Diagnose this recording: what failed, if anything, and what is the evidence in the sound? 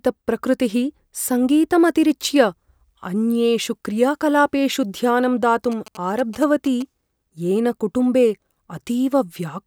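GSM signalling bursts enter at the analogue wiring from 5.72 to 6.82 s, right after "अन्येषु क्रियाकलापेषु ध्यानं". A galloping dit-dit-dit of short 217 Hz buzzes sits roughly 20 dB below the speech. The audio circuit rectifies radio bursts from a nearby 2G phone.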